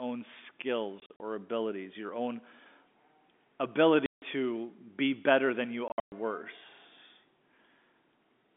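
Packet loss filled with silence chops the speech at 1.0 to 1.2 s, just before "or abilities your own", at 4.06 to 4.22 s, and at 5.88 to 6.12 s after "be better than you". Lost audio becomes hard-edged holes sized in steps that fit 20 ms packets.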